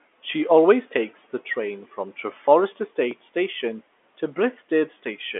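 Nothing in this speech recording stands out as a technical fault. It carries G.711 mu-law telephone coding at 64 kbps, with the sound held to roughly the 250 Hz to 3.4 kHz line band and nothing above about 3.7 kHz.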